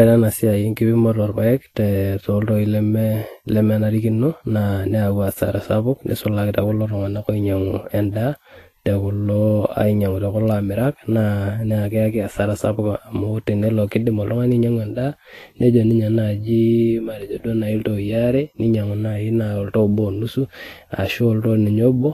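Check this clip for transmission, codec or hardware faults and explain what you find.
One codec fault runs through the whole clip. Vorbis compression, throughout: treble above 14.2 kHz is missing and the remaining highs are coarsely quantised into grainy hiss, likely from a low-quality encode around 33 kbps.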